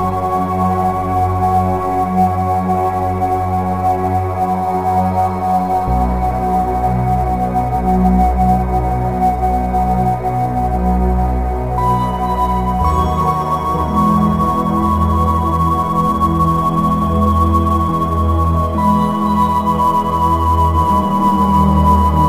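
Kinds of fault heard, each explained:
sample clock jitter: the converter's clock wanders by roughly 7 microseconds, so samples land slightly off time, with errors that grow on steep waveform slopes. Throughout the clip this adds a hiss and roughness about 30 dB below the signal, tracking loud, bright moments.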